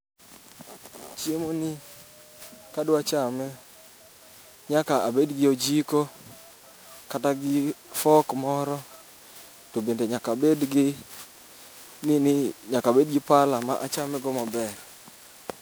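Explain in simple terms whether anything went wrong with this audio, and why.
Something did go wrong, and it lasts the whole 16 seconds. The speech sounds swirly and hollow, as if heard through a metal tube. Consonants that should be crisp come out soft and blurred. This is generation loss. The likely cause is that the recording was saved as an MP3, reopened and saved again, around ten times over. Each save throws away a little more detail, and the damage keeps piling up.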